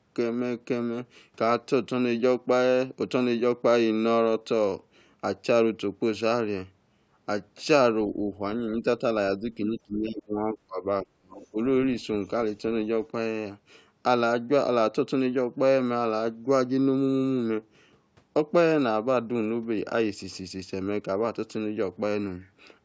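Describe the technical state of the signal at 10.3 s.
At 10.3 s the speech is inside a suppressed stretch running from 9.38 to 10.85 s, where the level dips unevenly by as much as roughly 20 dB, with about a second of the span audibly affected. This is speech suppressed in double talk, likely caused by an echo canceller that, with both ends talking at once, mistook the near talker for loudspeaker echo and attenuated everything. The call path's band limit, with nothing above 8 kHz, is unrelated.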